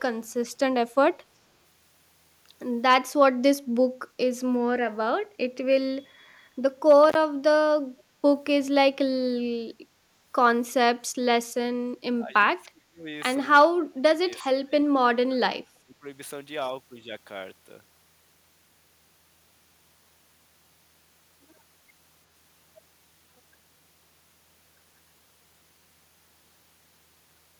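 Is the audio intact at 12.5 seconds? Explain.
No. Speech is suppressed in double talk from 12.18 to 13.07 s and dips by about 25 dB. An echo canceller likely mistook it for echo.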